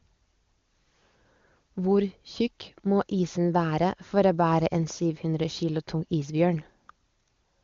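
No technical faults can be heard in the speech, and the band stopping near 7.2 kHz, with the clarity of the coding, fits the AMR wideband (HD Voice) codec at its top rate of 23.85 kbit/s working as designed.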